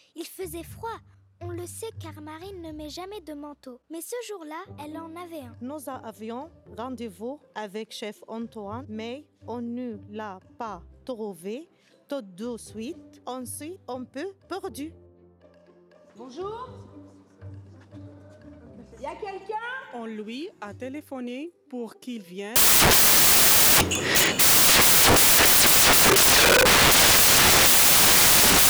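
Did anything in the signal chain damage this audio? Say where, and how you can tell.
Yes. From 22.56 s to the end of the clip at 28.70 s the audio turns into loud, harsh broadband noise. That pattern points to samples built from the wrong bytes at the sample-format conversion stage. The reader is misassembling each sample through a byte offset, swapped byte order or wrong alignment, so the rapidly varying low-order bits land in the most significant positions and dominate every value.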